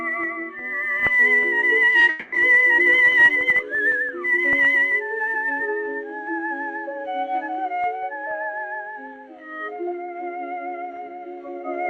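At 1.99 to 2.03 s a sound is held about 20 ms too long before continuing unbroken: a short stall from a late packet that emptied the jitter buffer.

From 2.09 to 2.34 s the last sound carries on as a fading buzz or hiss for about 230 ms, never dropping to silence, then resumes where it stopped. This call audio freeze was likely caused by delayed packets draining the jitter buffer.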